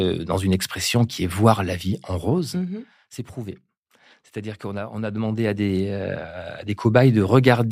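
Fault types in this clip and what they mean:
Zipper noise: unsmoothed 1 dB level steps click, giving a ticking that rides on the speech as the level falls about 15 dB, then rises.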